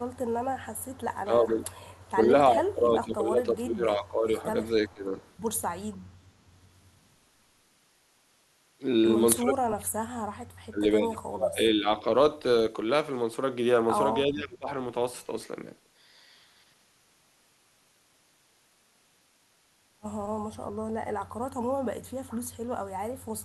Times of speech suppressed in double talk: 1.24-1.60, 2.24-5.15, 9.39-10.09, 10.70-12.08, 14.25-14.68

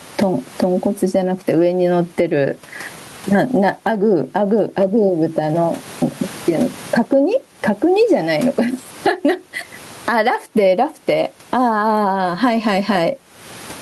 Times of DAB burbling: none

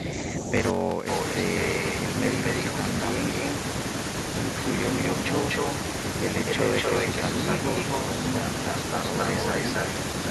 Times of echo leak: 1.10-3.55, 5.02-5.74, 6.48-9.86

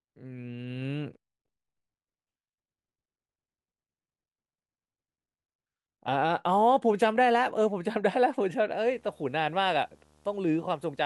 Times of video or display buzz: 8.85-11.05

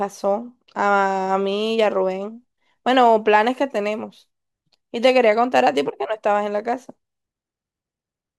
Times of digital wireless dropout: none

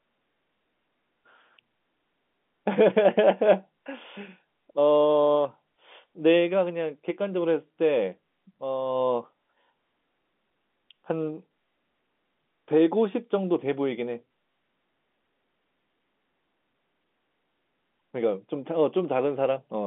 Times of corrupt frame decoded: none

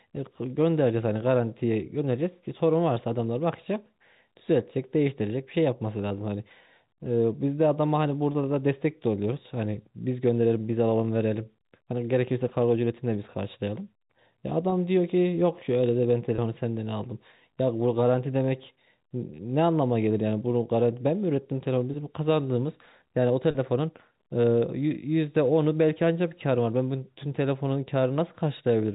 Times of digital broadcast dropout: none

